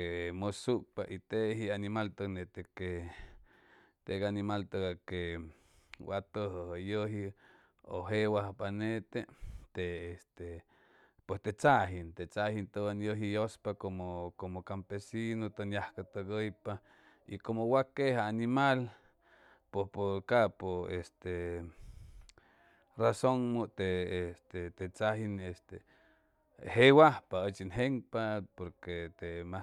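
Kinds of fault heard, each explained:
No kinds of fault are heard in this clip.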